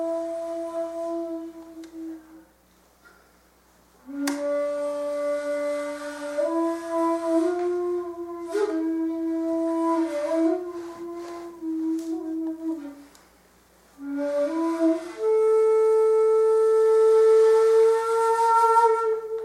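No faults to report in this recording; nothing in the signal path calls for attention.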